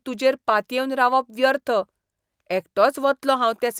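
No technical faults can be heard anywhere in this speech recording.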